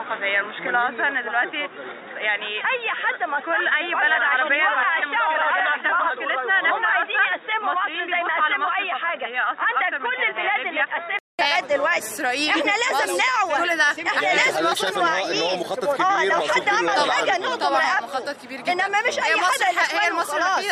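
Until 11.39 s the audio is boxy with nothing above 3.8 kHz and faint noise, likely an input switched to a poorer device. A 200 ms gap precedes fuller sound.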